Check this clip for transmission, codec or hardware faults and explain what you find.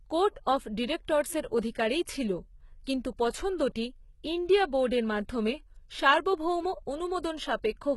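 One codec fault runs through the whole speech clip: HE-AAC compression is the likely cause. Heavy damage and nothing above 11.8 kHz point to a very low bitrate, around 16 kbps. Treble is rebuilt by copying lower bands upward, so harmonics misalign across the crossover and s sounds turn gritty, metallic or lispy.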